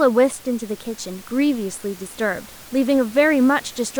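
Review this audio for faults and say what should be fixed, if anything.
No faults turn up in this audio, so nothing needs to be fixed.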